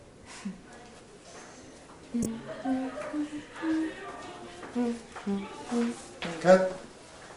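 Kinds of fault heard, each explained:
Corrupt frame decoded: at 2.23 s a burst lasting about 34 ms, roughly two frames' worth, with error peaking around -5 dBFS. Damaged bits were decoded as wrong gains and codes. A dropout would leave silence, and a click would be shorter with no pitch.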